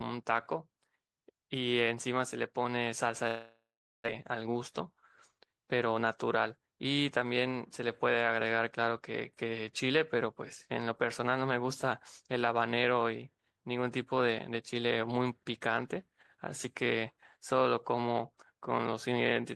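From 3.27 to 4.08 s the speech breaks off. The last sound is stretched into a fading buzz, then about 0.43 s of silence follows, and the speech resumes with about 0.6 s of material gone. This is likely a long network dropout.

From 4.34 to 6.03 s a jitter buffer speed-up follows. The receiver trims short pitch-period slices repeatedly to shed roughly 150 ms of accumulated delay. Speech runs at about 109% speed with unchanged pitch and sounds hurried.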